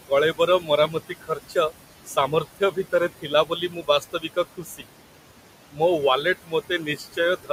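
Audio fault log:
throughout, noise suppressor artifacts: the suppressor pulls the room noise down by about 17 dB wherever it judges a band to be steady noise, working frame by frame. So the background drops away in the gaps and comes back up under the speech. The room noise sits only about 14 dB below the speech.
0.07–1.71 s, 2.06–4.86 s, 5.72–5.81 s, 6.22–7.5 s, speech cut by the noise suppressor: in these stretches the suppressor mistakes quieter parts of the speech for noise and turns them down along with the background, by up to about 18 dB at worst. Softer consonants and word endings sound swallowed or faint, adding up to roughly half a second in the first span, around a second in the second, a brief moment at 5.72 s, and about half a second near the end.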